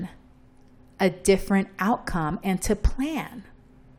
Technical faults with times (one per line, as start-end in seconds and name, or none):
none